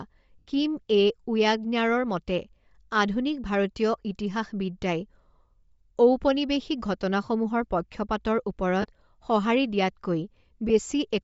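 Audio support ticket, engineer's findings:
Breathy, grainy edge on speech, whole clip. Upper band thin, filled with noise rather than real detail. Likely Bluetooth LC3 compression at a low bitrate, around 32 kbps. Encoder zeroes upper spectrum, decoder fills it with noise. Plainly audible.

Lost LE Audio frames, three events. 0.39 to 0.47 s: 80 ms noisy smear, fits eight 10 ms frames, decaying as concealment fades. 8.82 to 8.85 s: shorter 20 ms smear. 10.69 s: brief 10 ms blip. Mechanism: LC3 decoder repeats last spectrum with random signs.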